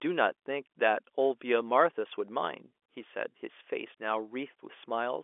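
No technical faults can be heard in this speech; it carries the narrow telephone band of G.711 mu-law coding, roughly 300 Hz to 3.4 kHz, as that line normally sounds.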